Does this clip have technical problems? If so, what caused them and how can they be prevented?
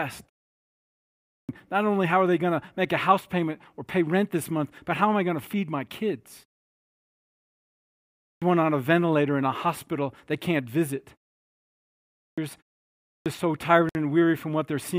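Yes. There is clipped start after a pause four times. At 1.10 to 1.49 s the speech resumes abruptly just before "not only how are". At 8.05 to 8.42 s the same happens before "one on a ventilator". It happens again at 12.05 to 12.38 s, and at 12.90 to 13.26 s before "so tired". Each time roughly 0.33 to 0.39 s of onset is swallowed. The pauses before them last 0.36 to 1.68 s. The output device drops into a low-power state during silence. It then needs time to wake and lock before it passes sound again. Keeping the output path awake, for example with a continuous low-level signal or by disabling power saving, prevents this.

At 13.89 to 13.95 s the sound cuts to silence for 58 ms. It then picks up again. This is likely a Bluetooth stall. Interference delays packets, so the headphone buffer empties. Playback halts until the resent packets arrive. The gap is brief, so little is lost. Reducing radio interference, or staying closer to the source, helps prevent it.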